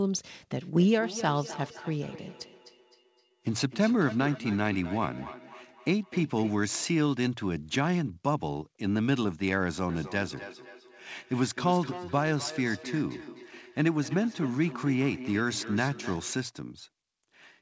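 Feedback echo between two devices: a second device replays this microphone's audio, which returns about every third of a second at about -13 dB, from 0.61 to 6.62 s and 9.89 to 16.4 s.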